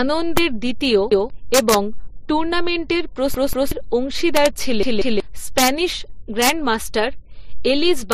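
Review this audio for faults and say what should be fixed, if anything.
Integer overflow: the gain or mixing stage wraps past the integer limit instead of saturating, so peaks pushed up to about 6 dB over full scale flip sign. The result is violent cracks on loud speech at 0.37, 1.54–1.75, 4.37–4.46, 5.58–5.68, 6.42–6.49 and 8.12 s. Fix it with saturating arithmetic or a limiter ahead of the integer conversion.

Repeated buffer: playback underran, so the device replayed its last 186 ms block, which fits an 8192-sample buffer. The speech stutters with hard joins at 1.12–1.30 s (one repeat), then at 3.34–3.72 and 4.83–5.20 s (two repeats each), losing roughly 0.2 to 0.4 s of audio each time. Feed the output buffer reliably, with more headroom.

Transcoding between lossy codecs: the audio was likely encoded as HE-AAC at 40 kbit/s, then re-encoded as MP3 at 40 kbit/s, so the second codec spends bits on the first codec's artefacts. 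Both sets of smearing are heard together, with nothing above 15.3 kHz. Encode once from the original source.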